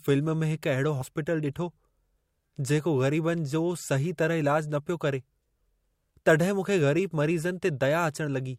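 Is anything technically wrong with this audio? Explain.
Yes, there are two faults in this speech clip. At 1.01 s there is a jump where the audio lurches forward by about 70 ms. These are compressed frames skipped: whole frames never reached the output, and the skip fits roughly four frames of 20 ms.

From 2.68 to 4.18 s a faint hiss and graininess rides on the louder, brighter parts of the speech and disappears in the pauses. This is sample clock jitter. The converter's clock wanders by around a microsecond, so samples land slightly off-time, leaving an error about 45 dB below the signal that grows with steep waveform slopes.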